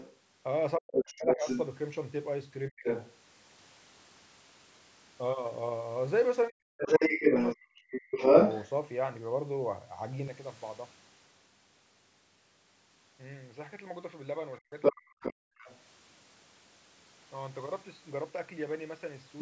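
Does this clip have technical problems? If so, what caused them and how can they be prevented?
Yes. The other side's voice leaking through, likely from an echo canceller that left loudspeaker playback in the microphone signal, puts a second voice, as loud as or louder than the talker, into the audio at 0.0–1.61 s, 2.84–3.14 s, 6.77–8.68 s and 14.81–15.81 s. A better acoustic echo canceller, or a headset instead of the loudspeaker, would prevent this.

Speech suppressed in double talk occurs at 0.77–1.47 s, 2.69–2.85 s, 6.49–8.17 s and 14.59–15.69 s. The canceller likely turned everything down while both sides spoke, so the talker's voice dips very deeply or nearly vanishes. An echo canceller with stronger double-talk handling, or reduced loudspeaker coupling, would avoid these dropouts.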